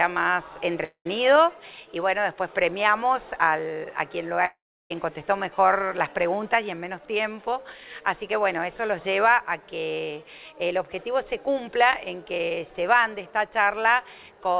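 Twice in this audio the network likely stopped delivering packets long enough for the receiver to run out of material: a long network dropout from 0.84 to 1.07 s, and another from 4.45 to 4.92 s. Each time the receiver stretches the last sound into a buzzy tail that fades, leaving silence for about 0.1 s in the first gap and about 0.34 s in the second. When sound resumes, roughly 0.22 s and 0.46 s respectively are simply gone. All of this comes through a call path whose mu-law coding leaves nothing above 4 kHz.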